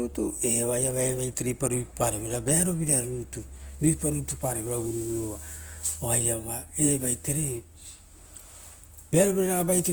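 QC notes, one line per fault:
Throughout: Opus compression. The speech sounds grainy and rough, with a noisy texture in place of clean detail. It is likely low-bitrate Opus in its music mode, fitting about 24 kbps, which fills starved bands with noise. Content still reaches 20.1 kHz.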